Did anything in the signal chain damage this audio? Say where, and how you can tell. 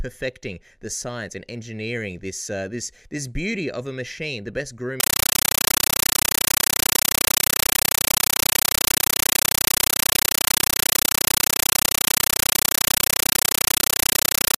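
Yes. Compressed stream played as audio from 5.00 s, after "a machine the best": an undecoded bitstream, likely AC-3, reaches playback as samples, giving loud static bursts of 9.33 ms at 31.25 Hz.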